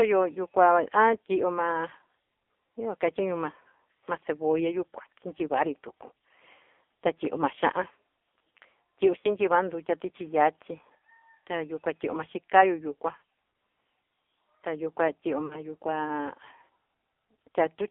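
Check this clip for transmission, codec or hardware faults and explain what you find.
Two faults are present: heavy AMR narrowband mobile codec coding across the whole speech clip, and three short bursts of lost AMR speech frames.

Throughout the clip, the speech has passed through the AMR-NB mobile codec at a very low rate, consistent with an AMR mode near 6 kbps. The codec rebuilds the voice from a vocal-tract model excited by only a few pulses per subframe, so at this rate the speech is heavily damaged and sounds buzzy and synthetic. The line band runs from about 300 Hz to 3.5 kHz, which leaves the speech thin and muffled.

At 9.20–9.28 s, 13.18–13.22 s and 15.46–15.58 s, AMR speech frames were lost. Each gap of about 40 ms fits two consecutive 20 ms frames that failed their checksum on the radio link. For those frames the decoder repeated the last good pitch and vocal-tract settings while lowering the gain. 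Each gap is heard as a brief smeared dip or warble, and the speech sounds rough for a moment as it returns.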